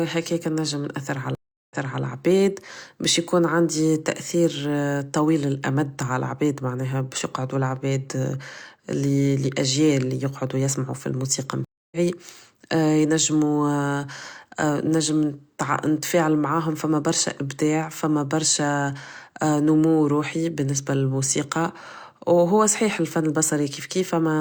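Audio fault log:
1.35–2.03 s, stream reconnect: After "نجم نأثر عل" the speech drops out for 357 ms, then resumes 325 ms earlier with "عباد بش يكون". The connection broke, and the server resent a burst to a freshly started decoder.
11.65–11.98 s, stream reconnect: After "لأجيال يقعدو يسمعو فالموسيقى", 271 ms of silence, then speech resumes about a fifth of a second later. The skipped audio went by live while the player reconnected.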